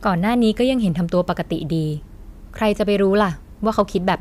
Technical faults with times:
3.79-4.11 hard clipping

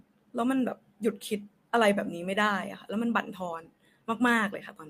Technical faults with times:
none

